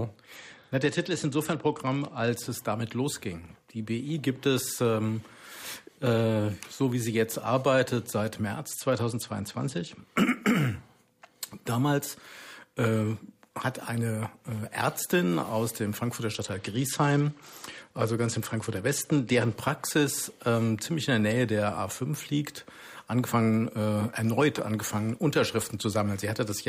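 Three Bluetooth SBC bit pool drops, at 0.36–2.30, 8.71–10.01 and 16.34–19.54 s, dull the treble and add grit as link congestion starves the encoder.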